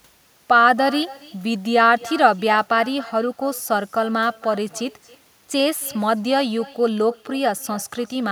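Echo with no canceller runs throughout the clip. The far end's loudspeaker feeds back into its microphone and nothing removes it, so every phrase returns roughly 300 ms later as a thin copy about 19 dB below the speech.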